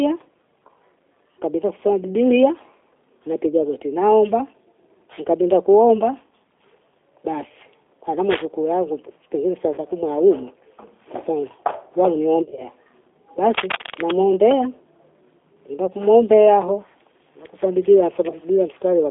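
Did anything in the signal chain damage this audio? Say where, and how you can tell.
Yes. A G.729 codec (the G.729A variant at 8 kbit/s) shapes the whole speech clip at the codec stage. The band runs only from about 300 Hz to 3.6 kHz, and the roughness is plainly audible: a slightly buzzy, synthetic texture. The decoder rebuilds each short frame from a vocal tract filter, a pitch predictor and a handful of pulses, so fine detail and anything above the band never arrive.

VoIP packet loss concealed by the speech codec occurs at the network stage, in three places. The first runs from 9.74 to 9.81 s, about 40 ms lost between "yangu pengine saa" and "kumwa hayumo". The second, 12.42 to 12.64 s, has losses scattered across roughly 180 ms. The third, 18.29 to 18.45 s, follows "hao kwenye kusoma bibilia". Each time, the decoder stretches its last pitch and filter into a buzzy tone or coloured noise that fades, and the sound stays weak until the frames rebuild.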